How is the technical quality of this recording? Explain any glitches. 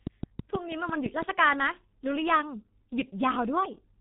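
The recording's technical quality is poor: the speech carries heavy low-bitrate codec damage throughout, and a burst of clicks sits over the opening second.

G.723.1 codec, throughout the clip: the speech has been squeezed through this early internet-telephony codec at 6.3 kbit/s. It rebuilds the voice from a coarse model updated in 30 ms frames and discards everything above 3.8 kHz. The result is muffled, hoarse speech with smeared consonants, since sibilants and plosive detail live mostly in the band that was removed.

Train of clicks, from 0.07 s to 1.23 s: a regular series of about seven sharp, similar pulses arrives at roughly 6 per second, peaking around 10 dB above the speech. Electrical interference from nearby equipment or a faulty connection or power supply is the likely cause. It is heard as steady ticking laid over the sound, also audible between syllables.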